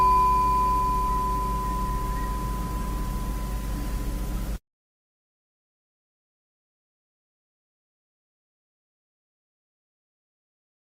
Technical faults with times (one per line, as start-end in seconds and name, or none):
2.70-5.71 call bitrate drop